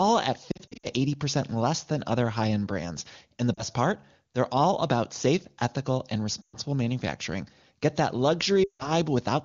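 Lost AMR speech frames break up the speech at 0.51 to 0.87 s, 3.54 to 3.63 s, 6.42 to 6.57 s and 8.64 to 8.89 s. Radio errors corrupted frames. The decoder repeated the last good sound with fading gain. Single lost frames give brief warbling dips, longer runs drop to near silence, then rough recovery.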